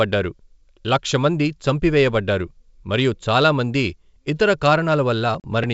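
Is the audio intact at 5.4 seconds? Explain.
No. From 5.40 to 5.47 s the speech cuts to a hard-edged silent hole of 40 ms, then returns briefly disturbed before settling. This is packet loss on an ADPCM call: a couple of lost packets were replaced by silence, knocking the G.722 decoder's adaptive predictor and step size out of step with the sender's.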